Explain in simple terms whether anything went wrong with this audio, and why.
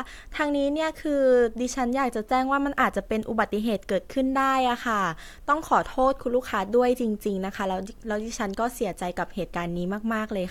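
Nothing went wrong here: no technical faults can be heard anywhere in the recording.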